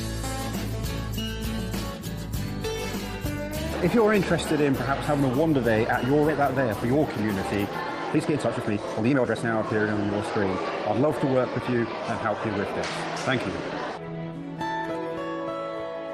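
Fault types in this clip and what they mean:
Skip ahead: A section of the audio was discarded while later material was already queued, so playback jumps straight past it. At 6.29 s about one and a half seconds of sound is missing, with no fill inserted. The material before and after the gap is butted together almost directly, producing an abrupt discontinuity instead of a pause. The lost stretch points to a burst of late packets being dropped or an overfull buffer being flushed.
Jitter buffer speed-up: The receive buffer was holding more audio than its target, so the receiver repeatedly removed short pitch-period-sized pieces to reduce delay. Playback runs faster while pitch stays unchanged. This happens three times: 6.41 to 7.24 s at 104 %, 8.15 to 9.83 s at 141 %, and 14.00 to 15.10 s at 105 %. The middle stretch drops roughly 0.7 s of audio and sounds clearly hurried. The other two are only slightly quicker.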